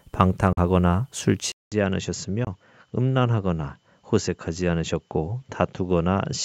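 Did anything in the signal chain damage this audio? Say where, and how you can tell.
Yes. At 0.53–0.58 s and 2.45–2.47 s, the waveform shows abrupt silent holes of about 43 and 21 ms, and the sound resumes as if it had played on. This is likely a Bluetooth dropout on the wireless link, consistent with two and then one lost packet.

From 1.52 s, after a silence of about 200 ms, the spectrogram goes blank above 7.6 kHz, the level drops roughly 5 dB, and a new noise floor appears. This likely means the input switched to a poorer device.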